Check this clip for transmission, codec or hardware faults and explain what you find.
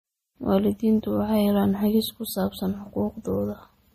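One codec fault runs through the whole speech clip. Throughout, it has likely MP3 compression damage, consistent with about 40 kbps: treble stops sharply at 15.2 kHz, with a flat spectrogram ceiling and flickering weak bands, sounding watery.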